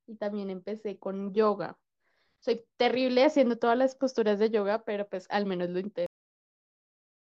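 At 6.06 s the speech suffers a cut-off end: the final stretch of audio was never written out, so sound stops mid-utterance and drops straight to digital silence. Unlike a fade-out or natural pause, there is no decay, and nothing resumes.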